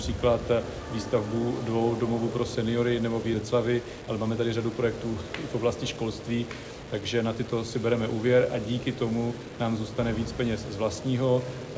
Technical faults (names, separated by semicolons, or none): low bit depth without dither; skip ahead; jitter buffer speed-up